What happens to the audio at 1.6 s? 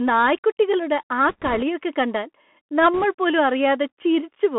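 A rushing, crackly noise runs over the speech from 1.29 s to 1.63 s, starting just after "നായ്ക്കുട്ടികളുടെ ആ", so 1.6 s is near its end. These are bit errors on a Bluetooth voice link: around 2 percent of bits are flipped. Each bit only nudges the level up or down slightly and the errors fade quickly, which gives crackle rather than loud clicks.

Throughout, including this moment, the sound is thin and granular, with scratchy s sounds and an underlying hiss. This comes from the Bluetooth CVSD headset codec, which codes each sample as a single up-or-down bit at 64 kbps with an adapting step. It passes only about 200 Hz to 3.4 kHz, and its step can't keep up with loud high sounds.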